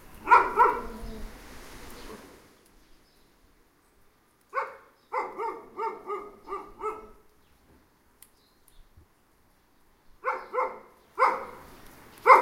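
The signal carries no technical faults; its level, timing and frequency content stay intact throughout the recording of everyday sounds.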